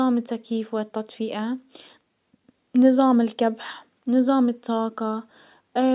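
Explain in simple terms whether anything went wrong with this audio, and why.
Nothing went wrong with this audio, because there is no fault to be heard anywhere in it.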